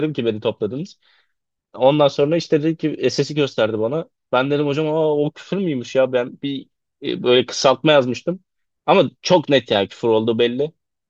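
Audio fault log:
No faults found in this speech clip; nothing to log.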